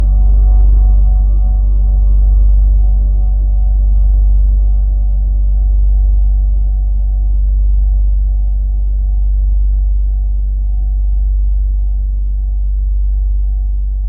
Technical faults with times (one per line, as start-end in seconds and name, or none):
0.25-0.98 hard clipping
2.33-2.41 hard clipping